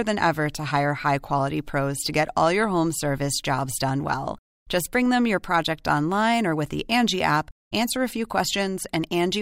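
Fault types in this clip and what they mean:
Nothing stood out on listening to this speech recording.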